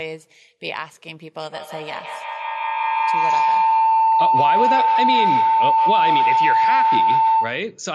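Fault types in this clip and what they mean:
Feedback howl: from 1.41 s to 7.79 s a ringing tone near 1 kHz swells and pulses roughly every 150 ms, peaking about 8 dB above speech. Two devices in one room share the call, and each microphone-to-loudspeaker trip adds level at that favoured frequency.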